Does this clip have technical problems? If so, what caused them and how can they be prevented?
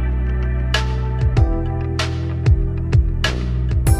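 No, nothing in this clip stands out as a technical problem, so there's nothing here that needs preventing.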